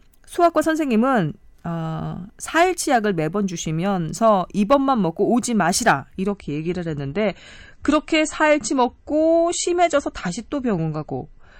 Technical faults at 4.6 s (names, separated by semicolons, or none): none